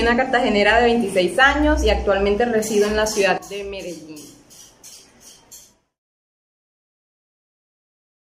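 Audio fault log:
3.38 s to the end, sudden gain jump: the sound and background noise drop together by about 12 dB instantly, likely a gain change applied without any ramp.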